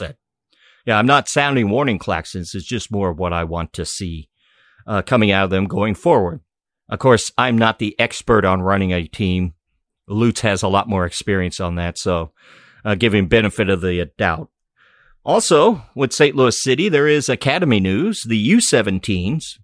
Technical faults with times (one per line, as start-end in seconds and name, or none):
none